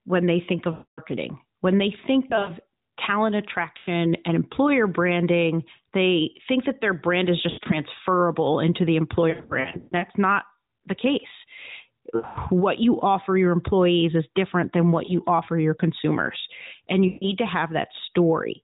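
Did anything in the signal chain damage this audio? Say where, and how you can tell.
Yes, on the radio link. Lost AMR speech frames smear, then fade, at 0.72–1.0, 2.28–2.51, 3.78–3.88, 7.5–7.8, 9.3–10.05, 12.16–12.38 and 17.08–17.33 s, with a brief dip at 15.06 s. The decoder repeats stale settings with falling gain.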